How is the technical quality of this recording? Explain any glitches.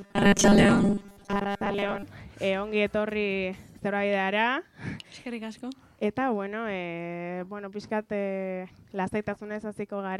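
The recording has one glitch, at the very start. From 0.01 to 2.04 s there is robotic sound from repeated short buffers. New audio was likely arriving too seldom, so playback kept repeating its last 5 ms chunk for most of that stretch, skipping real material. The result is a rigid, metallic 200 Hz buzz that only loosely tracks the underlying sound.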